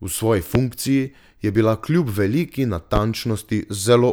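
A sudden voltage step, likely from a plug, switch, static discharge or driver glitch, enters the signal chain twice, producing a loud pop each time. The first, from 0.55 to 0.59 s, peaks about 20 dB above the speech as a single sharp pop. The second, from 2.96 to 3.00 s, is a slightly softer single pop at about 15 dB above it. The speech continues underneath both.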